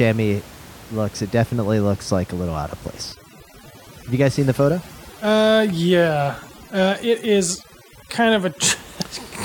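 From 3.12 to 8.69 s, overdone noise removal sets in. A noise reducer pushed too hard pulls individual frequency bands down whenever they sit near its noise estimate, taking quiet parts of the speech with them, so the background drops and breaks up into twinkling specks.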